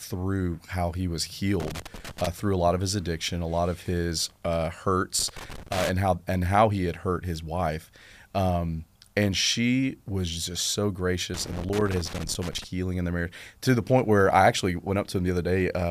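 Loose connector crackle breaks into the speech three times: 1.6 to 2.27 s after "how he was", 5.19 to 5.91 s after "lot of his uh", and 11.34 to 12.64 s after "she was just so". A worn contact keeps making and breaking, so the signal gets chopped into irregular scratchy bursts.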